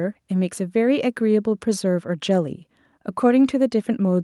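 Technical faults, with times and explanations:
No technical faults detected.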